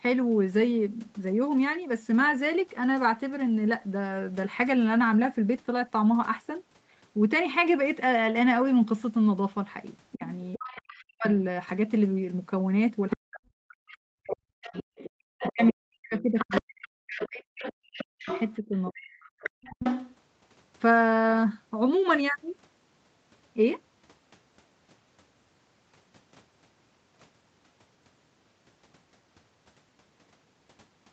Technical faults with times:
10.12-11.04 other side's voice leaking through
10.15-11.25 speech suppressed in double talk
13.10-20.16 other side's voice leaking through
13.16-19.52 speech suppressed in double talk

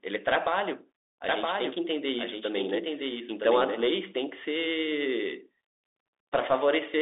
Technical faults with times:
0.00-7.02 Bluetooth CVSD headset codec
1.29-3.85 doubled audio track

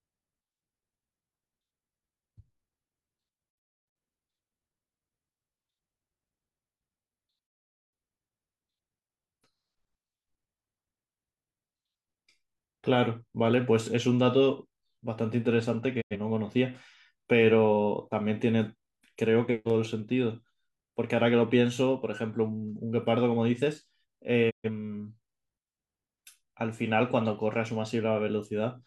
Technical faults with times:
3.50-3.97 digital broadcast dropout
7.47-7.93 digital broadcast dropout
16.00-16.16 digital broadcast dropout
24.49-24.69 digital broadcast dropout

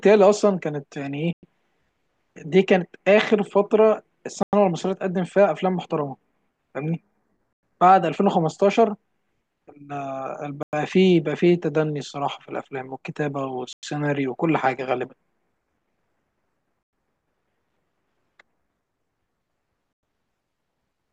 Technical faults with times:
1.33-1.43 gap between chunks
4.43-4.53 gap between chunks
7.53-7.63 gap between chunks
10.63-10.73 gap between chunks
13.73-13.83 gap between chunks
16.83-16.93 gap between chunks
19.93-20.03 gap between chunks

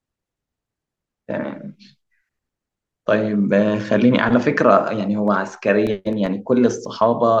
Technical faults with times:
5.28-6.85 CD scratch ticks

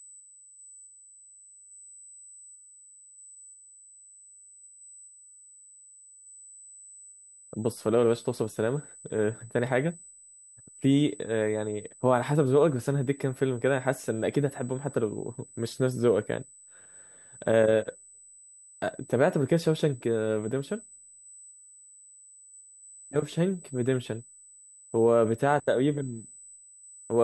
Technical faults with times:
0.00-27.24 USB whine

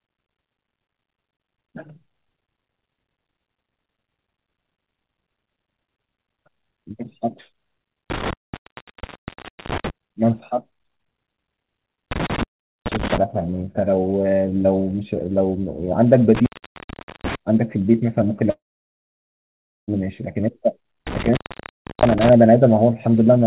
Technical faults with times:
8.10-9.90 intermittent contact
12.11-13.18 intermittent contact
16.35-17.35 intermittent contact
18.50-19.90 long network dropout
21.07-22.33 intermittent contact

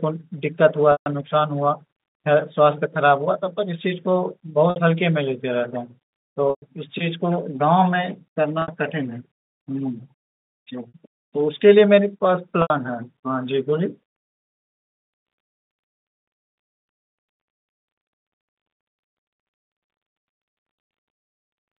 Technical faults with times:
0.92-1.06 packet loss with pitch repetition
4.70-4.76 packet loss with pitch repetition
6.50-6.62 packet loss with pitch repetition
8.62-8.68 packet loss with pitch repetition
10.88-10.92 packet loss with pitch repetition
12.62-12.70 packet loss with pitch repetition
21.40-21.48 packet loss with pitch repetition

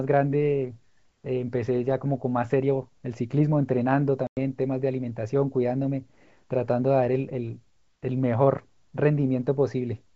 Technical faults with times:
4.27-4.38 packet loss on an ADPCM call

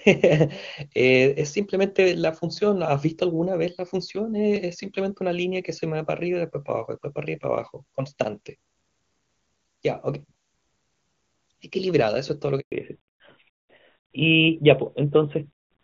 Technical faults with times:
12.60-12.72 handover gap
12.72-15.84 fallback to narrowband

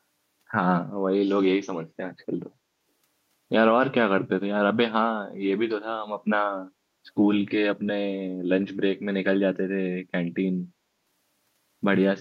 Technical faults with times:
2.20-2.25 echo leak

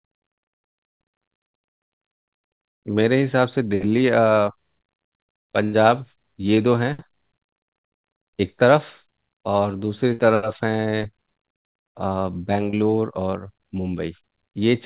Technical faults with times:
5.64-5.75 burst of packet loss
6.55-6.59 short concealed packet loss
10.13-10.20 burst of packet loss
12.70-12.75 short concealed packet loss

